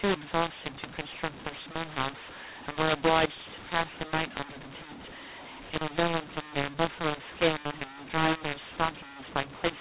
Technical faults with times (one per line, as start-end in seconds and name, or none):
0.00-9.81 mu-law and A-law mixed up